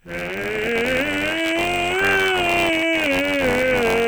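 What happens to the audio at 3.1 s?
At 3.1 s the music is inside a time-stretched section that runs from 1.08 s to the end. It plays at about half speed, 0.515 times, with pitch unchanged. It drags. Software likely repeated short pieces to lengthen it while holding pitch.

Buffer tearing is also present at 3.1 s, as it is across the whole clip. A robotic buzz sits on the music at 93.8 Hz, which fits a 512-sample buffer. In each period, roughly a sixth of the buffer replays audio from about 20 ms earlier, with hard joins on both sides.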